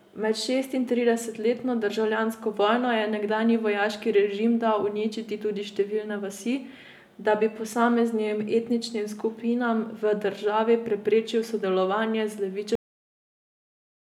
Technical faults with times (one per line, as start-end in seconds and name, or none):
12.75-14.20 cut-off end